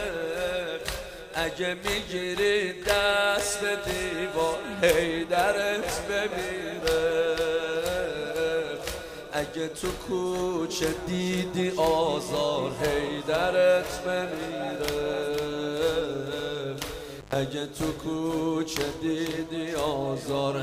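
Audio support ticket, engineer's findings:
Dropout with crackle at both edges, 17.19 to 17.35 s; signal gone for about 115 ms, faint hiss underneath. Probable component: loose cable or plug. Intermittent contact: the connection opens briefly, the crackle marking the contact breaking and remaking, with the hiss left in the gap while the line is open.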